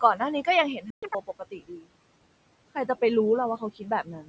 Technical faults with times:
0.00-4.28 noise suppressor artifacts
0.76-1.89 speech cut by the noise suppressor
0.90-1.03 playback stall
1.03-1.15 catch-up at higher speed
3.60-4.28 speech cut by the noise suppressor

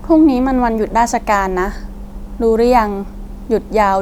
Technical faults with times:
none

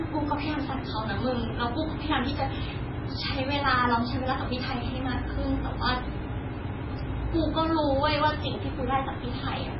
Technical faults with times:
0.00-9.79 MP3 compression

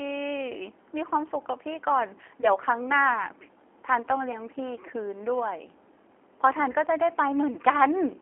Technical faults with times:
0.00-8.21 G.729 codec
2.41-2.48 VoIP packet loss concealed by the speech codec
4.32-4.42 VoIP packet loss concealed by the speech codec
6.72-6.76 VoIP packet loss concealed by the speech codec

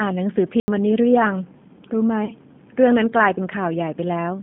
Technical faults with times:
0.00-4.43 G.729 codec
0.60-0.68 block of digital silence
2.25-2.33 VoIP packet loss concealed by the speech codec

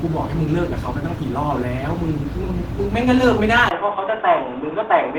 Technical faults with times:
0.00-5.19 Opus compression
3.69-5.19 input switched to a poorer device

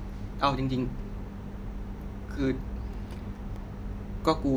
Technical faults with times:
2.94-3.56 CD scratch ticks

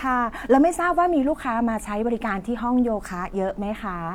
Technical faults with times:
none

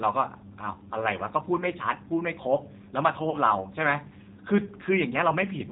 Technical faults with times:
0.00-5.71 G.729 codec
3.30-3.38 VoIP packet loss concealed by the speech codec

